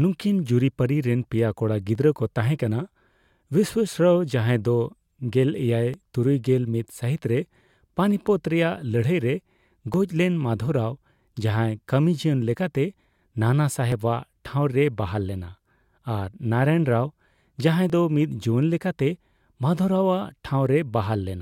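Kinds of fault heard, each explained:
Overlap between stream segments: overlapping segment time stamps make the player cut a few milliseconds of real speech. Tiny skips fall every 4 s: 1.95, 5.94, 9.94, 13.92 and 17.90 s.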